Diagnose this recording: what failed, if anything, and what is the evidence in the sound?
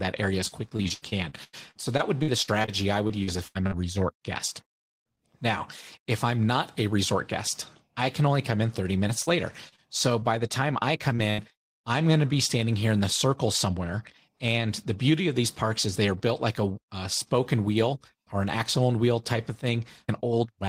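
Repeated packet loss (robotic sound), a network fault, runs from 0.47 to 3.74 s, between "area as" and "resort guest". It recurs from 9.08 to 10.24 s, ending at "the time I". Nineteen gaps, then five, up to 91 ms, were patched by extending prior sound, giving choppy speech with pieces missing.

Short concealed packet loss at 11.16 to 11.20 s is another network dropout. About 20 ms of audio never arrived, and the decoder bridged it by continuing the preceding sound before blending back. It leaves a brief smear or wobble rather than an audible hole.

A burst of packet loss from 11.30 to 11.40 s, just before "I'm going to be", removed about 80 ms of consecutive audio. The receiver stretched the last sound while fading it, producing a held buzz or dying hiss, then resumed later with that stretch missing.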